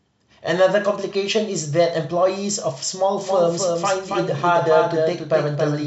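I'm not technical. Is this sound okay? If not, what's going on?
No, from about 3.21 s to the end there's a doubled audio track: the same speech plays twice, with a second, slightly quieter copy trailing about a third of a second behind and cutting in suddenly. It's likely the audio got recorded twice through a slower path.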